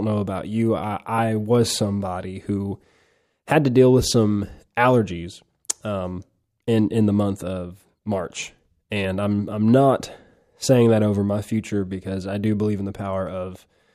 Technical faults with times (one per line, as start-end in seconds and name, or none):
none